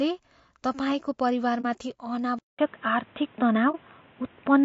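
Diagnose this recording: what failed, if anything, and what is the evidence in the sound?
The codec stage is at fault for the whole of this speech. The voice is rough and grainy, with noise filling the gaps between harmonics and a top band that sounds thin and synthetic. That is the sound of low-delay AAC compression, likely AAC-ELD at a low rate that fits about 32 kbps. Its short frames resolve pitch harmonics poorly and spend bits inefficiently. The damage is constant rather than tied to moments, which separates it from the dropouts and the device change.

Two soft holes open in the decoded stream, at 1.61 to 1.65 s and at 3.71 to 3.75 s. Each lasts about 40 ms, which fits a single lost frame of roughly 30 ms. This is AAC frame loss with muting. The decoder zeroed the missing frame's spectrum, and the overlapping windows faded the sound out and back in. There is no repeated fragment, which distinguishes it from a buffer underrun or from concealment that repeats audio.

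At 2.39 s the capture stage changes. After a 200 ms silence, the sound comes back dull and boxy, with nothing above 3.8 kHz, a level shift of a few decibels, and a new noise floor around 35 dB below the voice. It stays that way to the end. This points to an input switched to a poorer device, likely a narrowband headset or a second microphone. Unlike codec band-limiting, the tone, level and noise all change at once.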